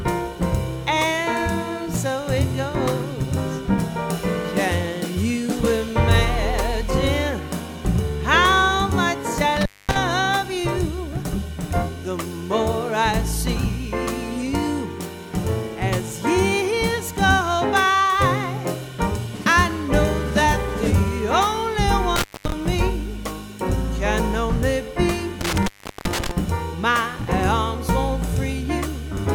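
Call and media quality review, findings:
Sound drops out or breaks up, crackle at the edges: 9.57–9.97 s (line open about 0.23 s), 22.16–22.52 s (about 0.23 s), 25.41–26.31 s (about 0.38 s, the longest). Intermittent contact, probable loose cable or plug in the capture chain. The connection opens briefly and the crackle comes from it breaking and re-making.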